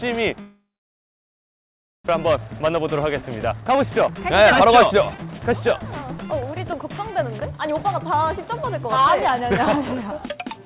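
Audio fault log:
0.40–2.10 s, long network dropout: The sound stops, leaving a brief fading buzz, then silence. Likely lost packets. About a second never returns.
2.26–4.63 s, 5.15–8.99 s, 9.40–10.44 s, jitter buffer speed-ups: Playback runs 7%, 11% and 6% fast at unchanged pitch. Short pitch-period pieces are cut to drain built-up delay. The band stays below 4 kHz.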